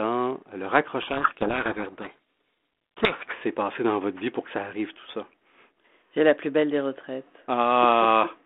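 From 1.02 to 3.33 s the speech is buried under harsh, grinding distortion, then clears to the thin telephone band of the 32 kbit/s G.726 link. This is a codec payload misread: the decoder took the G.726 code words in reversed bit order, producing wrong sample differences.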